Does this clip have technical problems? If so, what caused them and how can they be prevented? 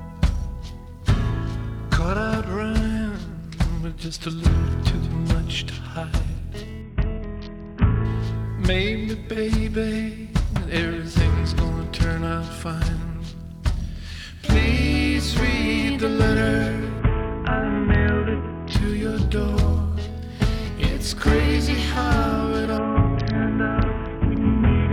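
Yes. Three Bluetooth SBC bit pool drops occur, at 6.82–8.05 s, 16.99–18.73 s and from 22.78 s to the end. In each, the treble dulls and a gritty quantisation noise rises, which points to the encoder falling from a bit pool of 31 to 6, about 55 kbps, on a congested link. The return to full brightness after the first two drops separates this from a fixed low-pass filter, and continuous sound separates it from packet-loss dropouts. Prevention: reduce interference and distance between devices.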